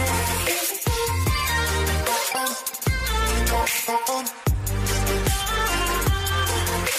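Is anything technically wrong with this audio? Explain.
No, nothing technically wrong is audible here.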